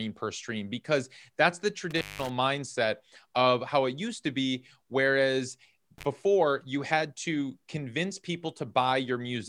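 At 1.91 to 2.29 s the speech drops out for about 182 ms, and again at 5.98 to 6.06 s for about 33 ms: intermittent contact. A loose connection opens briefly, so the signal cuts off with crackle at each edge and faint hiss remains.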